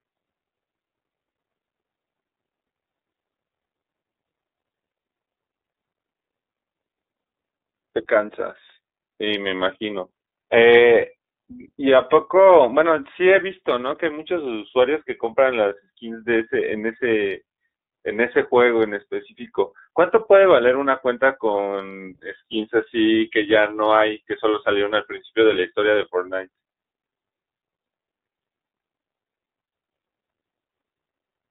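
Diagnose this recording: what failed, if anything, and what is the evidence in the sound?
The failure is at the codec stage: the speech has passed through the iLBC codec for the whole recording, and the damage is plainly audible. Energy is confined to a telephone line band of roughly 300 Hz to 3.7 kHz, so a spectrogram shows a hard ceiling near 3.7 kHz with nothing above it. The sound is rough and slightly synthetic because each frame's excitation is coded independently. That frame-by-frame texture fits the 30 ms, 13.33 kbps mode.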